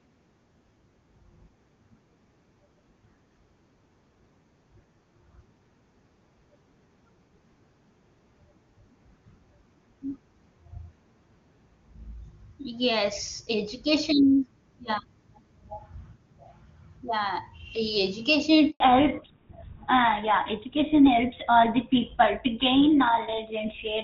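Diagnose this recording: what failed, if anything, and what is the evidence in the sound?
A handover gap hits at the network stage: the speech drops out at 18.70 s and stays silent for 100 ms until 18.80 s. That's the call switching networks with no speech frames arriving, so whatever was said in that window is simply gone.

Right after, at 18.80 s, there's a fallback to narrowband that lasts to the end. Up to the gap, the HD Voice sounds clean, which fits a high-rate AMR-WB link. After it, there's nothing above 4 kHz, so the speech turns dull and rougher, consistent with renegotiation down to an older codec like GSM full rate.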